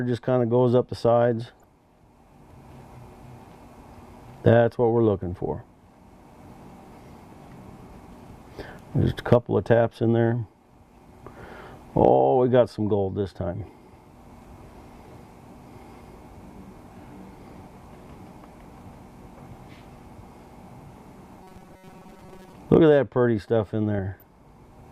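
DAB burbling appears at 1.41 to 1.64 s, 8.64 to 8.70 s and 13.61 to 13.69 s. Bit errors slipping past error correction corrupt samples and scale factors, giving short blips of noise in single sub-bands and making individual sub-bands jump in level for up to a frame. On a spectrogram it shows as blocky, band-limited bursts.

From 21.43 to 22.53 s the sound turns into a rigid, metallic buzz at 188 Hz. This is the robotic sound from repeated short buffers, likely caused by the last few milliseconds being replayed while new audio arrives too slowly. That repetition rate fits a chunk of about 5.3 ms. A spectrogram shows evenly spaced harmonic lines at multiples of 188 Hz, and the waveform shows one short segment copied over and over.

The burbling returns from 23.98 to 24.41 s, with the same patchy sub-band flicker.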